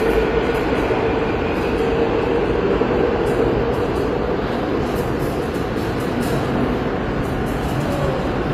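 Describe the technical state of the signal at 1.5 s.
At 1.5 s, as everywhere in the clip, the audio has layered smeary, swirly artefacts and nothing above 15.7 kHz. This is likely transcoding between lossy codecs: an MP3 stage that spends its bits re-coding damage left by earlier low-rate AAC- and Opus-style encodes.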